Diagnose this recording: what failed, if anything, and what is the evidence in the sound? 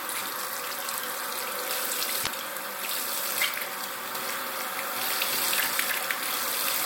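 Damaged data in a compressed stream, 2.20 to 2.27 s. This is a codec-stage failure. For about 76 ms the audio breaks into a short glitch. Part of the compressed stream arrived wrong, so the decoder could not parse those frames. It lost frame sync, emitted garbage or dropped material while hunting for the next valid header, then resumed once it locked on again.

Doubled audio track, from 4.15 s to the end. A second full-band copy of the sound enters abruptly and runs roughly 300 ms behind the original at about the same level. It carries no decay and no room colouring, so it is not an acoustic echo. The likely cause is a storage or editing stage: two misaligned copies were kept in the mix, or a slower capture path duplicated the signal.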